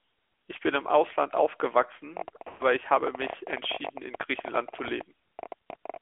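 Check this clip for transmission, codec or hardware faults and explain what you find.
Three faults turn up here: a mobile codec coloring the whole thing, a stretch of clicking, and one short dropout where speech frames went missing.

The AMR narrowband mobile codec runs throughout. Speech squeezed into roughly 300 Hz to 3.4 kHz at 10.2 kbps sounds boxy and noticeably buzzy and synthetic.

A train of clicks runs from 2.17 to 5.97 s, about 13 a second, irregularly spaced, roughly fifty in all, popping well above the speech, likely interference.

Lost AMR speech frames show up at 2.48 to 2.63 s. The decoder stretches the last good sound for 120 ms while it fades, which fits six lost 20 ms frames.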